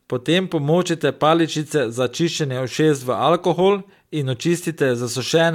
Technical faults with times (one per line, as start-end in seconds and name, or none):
none